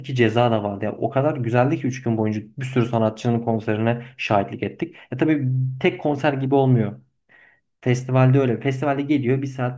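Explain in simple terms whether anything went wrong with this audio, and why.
Nothing went wrong here.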